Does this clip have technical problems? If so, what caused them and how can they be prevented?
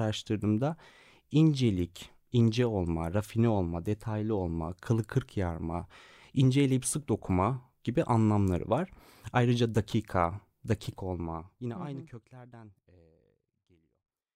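No, this clip has no technical problems.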